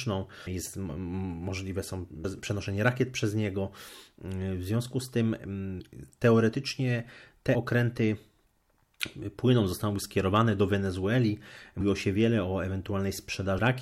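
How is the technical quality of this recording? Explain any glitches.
The speech has five brief, smeared blips where the audio suddenly leaps forward: at 0.46 s, just before "jest możliwe są"; at 2.24 s, between "jest możliwe są" and "przenoszenie rakiet przez niego"; and at 7.54, 11.80 and 13.57 s. These are compressed frames skipped. Whole frames go missing or are rejected by the decoder, so roughly 300, 200, 70, 150 and 150 ms of sound vanish. The jumps fit a frame length of about 26 ms, and the overlap between neighbouring frames blurs each join into a blip rather than a sharp click.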